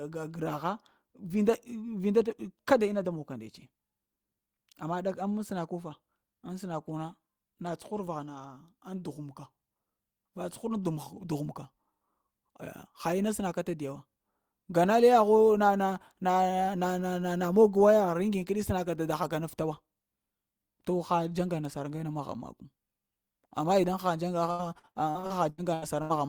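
Speech, with repeated packet loss (robotic sound) from 24.51 to 26.13 s near the end of the clip. Over that stretch the stream breaks up in nine short gaps, the longest about 80 ms, and each hole is papered over by extending the preceding sound. Roughly a third of the span is concealed audio, so the speech turns choppy, with fragments missing between the patched sections.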